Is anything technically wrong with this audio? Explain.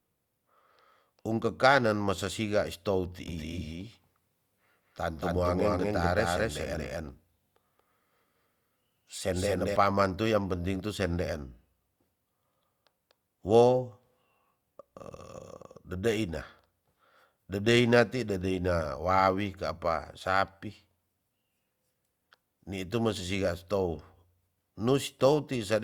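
Yes. From 3.28 s to 9.76 s, after "masa sia is tou" and until "tu yang penting tu", the speech has a doubled audio track. A second full-band copy trails by roughly a fifth of a second at about equal level, likely from a slower second capture path. It sounds like a clean, dry slapback echo that starts and stops abruptly.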